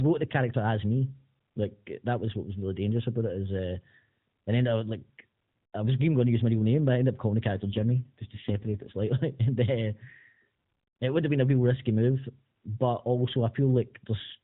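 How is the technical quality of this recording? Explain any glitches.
The speech comes through a narrowband mobile channel, AMR-NB, with nothing above 4 kHz and only light codec colouring, and it has one glitch.

AMR rate drop, 7.54 to 8.97 s: for about 1.4 s the codec falls to a lower bit rate, and the roughness heard fits a step down from 12.2 to 5.9 kbps. The bandwidth holds and there is no gap. With fewer bits to describe each 20 ms frame, the voice turns buzzier and more synthetic, then clears once the rate climbs back.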